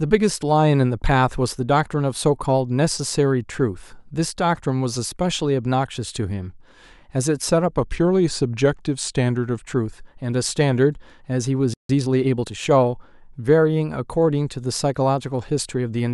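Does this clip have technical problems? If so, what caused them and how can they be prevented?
Yes. A drift correction step runs from 7.77 to 9.58 s. For just under two seconds the speech slows by about 5.8% and drops roughly 104 cents, a little more than a semitone, then snaps back to normal speed and pitch. The likely cause is clock-matching software that changed the playback rate in a single jump to refill its buffer after the sending and receiving clocks drifted apart. Resampling continuously in very small steps, instead of one large correction, would prevent this.

A playback stall follows from 11.74 to 11.89 s. The speech cuts to silence for about 156 ms in mid-flow and then resumes. This likely happened because the player ran short of data or its audio thread was blocked, so nothing reached the output until it recovered. A larger playback buffer and a higher-priority audio thread would prevent this.

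Time-compressed catch-up comes straight after the stall, from 11.89 to 12.51 s. The speech plays at about 1.25 times normal speed with its pitch unchanged. That hurrying comes from the player cutting small slices out of its backlog and cross-fading across each cut to make up the time it lost. Preventing the stall in the first place removes the need for catch-up, and a gentler compression rate would make any catch-up less noticeable.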